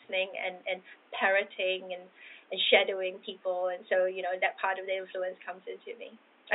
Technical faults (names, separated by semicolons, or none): none